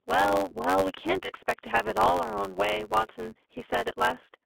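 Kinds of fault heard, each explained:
iLBC codec: The speech passes through a narrowband VoIP codec coding each 20 ms frame on its own. The line band runs from 300 Hz to 3.5 kHz, so everything above is gone. The codec roughness is plainly audible, giving the speech a slightly synthetic, grainy edge.
block size mismatch (truncated): One stage writes longer blocks than the next reads, and each block's tail is discarded. This shows as a steady buzz near 92 Hz, which fits a 512-sample block. The speech runs about 1.07 times fast.
lost iLBC frames: Packets went missing, and the decoder filled the gaps by repeating the last pitch cycle mixed with noise. Each gap sounds like a short held, buzzy vowel, about 40 ms and then 20 ms long. Normal speech returns almost immediately afterwards.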